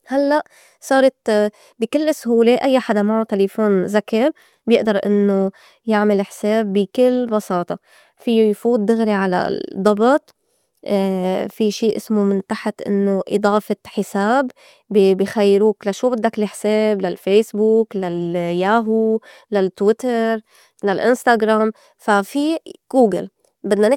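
No technical faults can be heard anywhere in this recording.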